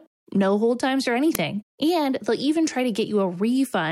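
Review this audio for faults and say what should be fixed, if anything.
An uninitialised buffer reached the output at 1.35 s: a block was played before any audio had been written to it, so leftover memory was read out as samples. The result is a loud crack lasting about 3 ms, which fits a 128-sample buffer. To prevent it, zero-fill every buffer on allocation and output silence whenever a block is not ready in time.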